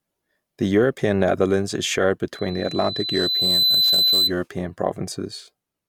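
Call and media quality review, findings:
Loudspeaker feedback squeal, 2.33 to 4.33 s, right after "is shared". Mic picking up its own loudspeaker, loop gain above unity at 4 kHz. A pure 4 kHz tone swells over about a second and a half, peaking a few dB above the speech.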